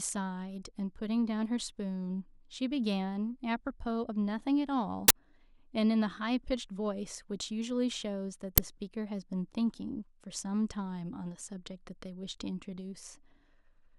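At 5.08 s the speech is interrupted by an uninitialised buffer: for about 21 ms, a stretch that fits a 1024-sample block, playback reads memory that was never filled with audio, and the leftover values come out as a sudden, loud burst of harsh digital noise. The same fault returns at 8.58 s as a much shorter click-like blast of about 5 ms, consistent with a 256-sample block played before it was written.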